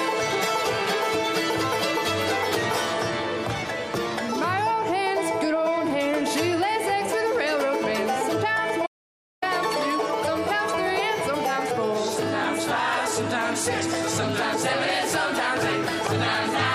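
At 8.87 s the sound cuts off abruptly into an audio dropout to silence lasting 0.56 s, until 9.42 s. The gap is silent with no room tone, likely from the input link or device dropping while recording continued. Whatever occurred there is lost.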